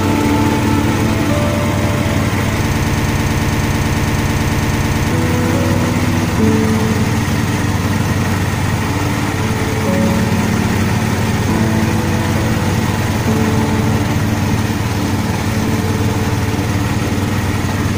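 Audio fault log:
2.71 to 5.12 s, broken-record loop: the same 110 ms fragment repeats exactly, back to back, 22 times, giving a rapid mechanical stutter for about 2.4 seconds. The likely cause is a stalled player or stream resending its last buffer, so the audio meant for that stretch is lost.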